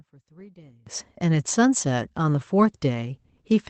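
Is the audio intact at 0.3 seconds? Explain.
No. At 0.3 seconds the speech sounds faint, sunk by about 26 dB, as if most of it has drained away, and this lasts from the start of the clip to about 0.87 s. The likely cause is one channel inverted: with one stereo side's polarity flipped, everything common to both channels cancels in a mono sum. The centred speech and its low end largely disappear, leaving only the faint difference between the two sides.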